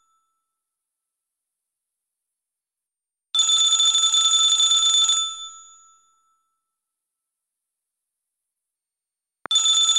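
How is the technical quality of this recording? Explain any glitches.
There is one glitch, a single loud pop near the very end, from 9.46 to 9.48 s. It is a short, sharp pop that stands roughly 5 dB above the surrounding sound, which continues underneath. The likely cause is a sudden voltage step or pulse, such as from a plug, a switch, static discharge or a driver glitch, added to the signal and shaped by the circuitry after it into a brief transient.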